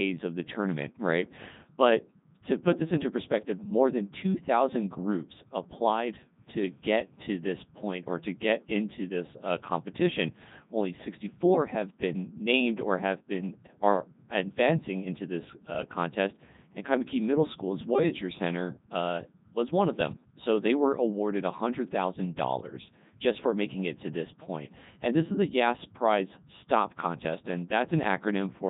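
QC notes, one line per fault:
Throughout: Codec 2 vocoder. The speech is robotic and buzzy, with a synthetic quality and heavy damage to the voice, and nothing is heard above about 3.8 kHz. The decoder rebuilds the voice from sine waves using only pitch, voicing, energy and a coarse spectral envelope, so the original waveform is lost. The band limit and the degree of damage fit Codec 2's highest, 3.2 kbit/s mode.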